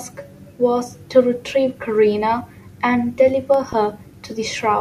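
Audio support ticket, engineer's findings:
Loud pop, double, 3.54 to 3.75 s, landing on top of the speech while it carries on underneath. Two sharp hits, peaking about 5 dB over the talker. Likely a voltage spike from a plug, switch or static discharge, or a driver glitch, pushed into the chain. The downstream circuitry shapes each pulse. Worth checking cabling and connectors first.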